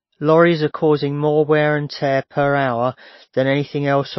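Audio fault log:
Throughout: MP3 compression, likely; nothing above 5.8 kHz, with watery, swirling speech and smeared attacks, as a very low bitrate strips treble and toggles weak bands.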